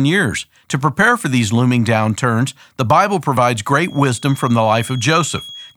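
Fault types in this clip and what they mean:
Feedback whistle: a thin 3.3 kHz tone about 20 dB under the speech from 3.77 s onward, likely a loop near feedback; a steady horizontal spectrogram line.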